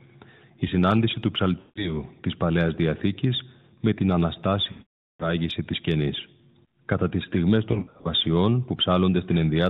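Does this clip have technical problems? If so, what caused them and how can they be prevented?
Yes. Lost AMR speech frames cause dropouts at 1.60 to 2.03 s after "συνάντηση του", at 4.72 to 5.30 s before "της κενής", and as scattered short gaps at 7.72 to 8.13 s after "τις στιγμές". The decoder stretches its last good sound with falling gain. The longest gap fades to silence. Better radio coverage prevents this.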